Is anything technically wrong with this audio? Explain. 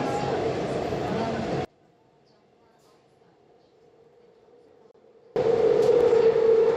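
Yes, there are three kinds of fault.

Dropped samples: sharp single clicks at 1.08 s, 4.69 s and 6.01 s, likely from a fraction of a millisecond of samples missing, making the waveform jump.

One channel inverted: from 1.65 s to 5.36 s the mono level drops by about 33 dB, likely because one channel's reversed polarity cancels the shared content.

Gap between stream segments: from 4.91 s to 4.94 s a hard-edged 31 ms silence cuts in where segment timestamps leave a hole that the player fills with silence.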